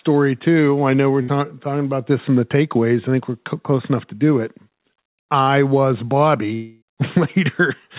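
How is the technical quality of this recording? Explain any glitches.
The recording has three network glitches in the speech. The sound is narrowband, with nothing above 4 kHz, which fits a telephone-grade G.711 mu-law call at 64 kbps.

At 1.22 to 1.30 s there is a burst of packet loss, between "too I know we're" and "talking about this in". About 60 ms of audio never arrived. The receiver stretched the last sound and faded it. You hear the last sound held briefly, then speech resumes slightly further on.

At 5.44 to 5.48 s there is a short concealed packet loss. Only about 20 ms went missing. The receiver continued the preceding sound and blended back into the real audio. It comes across as a tiny smear or wobble in the speech.

From 6.54 to 6.84 s the sound turns into a fading continuation of the last sound for roughly 0.3 s. The audio then picks up again with about 280 ms of speech gone. 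It never drops to full silence. The likely cause is a long network dropout concealed by the receiver.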